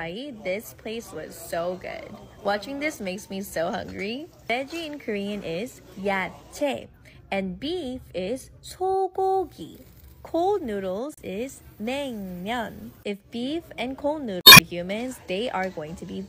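At 11.14 to 11.20 s, damaged data in the compressed stream makes the decoder misread frames and lose sync, so a brief glitch cuts through the sound before it picks up again at the next valid frame header. At 12.80 s a DC step shifts the waveform's zero line, heard as a low thump or click, with the offset then draining away as a 20 Hz high-pass pulls it back. At 14.38 to 14.60 s corrupted data strikes again, longer this time, and the decoder spends about 0.2 s hunting for sync, giving a longer glitch before normal decoding resumes.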